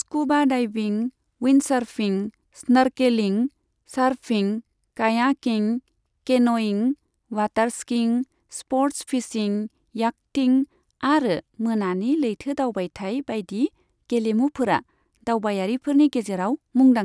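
A speech recording with no technical faults to report. Nothing in it calls for a time stamp or a cause.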